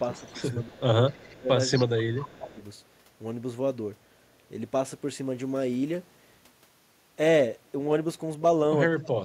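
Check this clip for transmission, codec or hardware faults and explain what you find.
Two faults appear, both tied to echo cancellation on a speakerphone-style call.

Echo leak, at 0.12–0.75, 1.1–1.27, 1.75–1.86 and 2.18–2.46 s: the far end's echo canceller likely missed part of its loudspeaker pickup, so a copy of the speech returns 244 ms late, faint at first and louder by 1.75 s.

Speech suppressed in double talk, across 0.2–2.6 s and again at 8.99–9.24 s: with both sides talking at once, the canceller likely mistook the talker for echo and attenuated both. The speech dips by roughly 20 dB in pieces totalling about a second and a half, then by roughly 35 dB at the very end.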